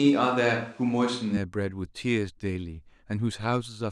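From the very start until 1.37 s, the speech sounds roomy and hollow, with thinner bass and a faint bed of room noise well below the voice, though the level stays about the same. The likely cause is a switch to a distant microphone, before the sound snaps back to close pickup.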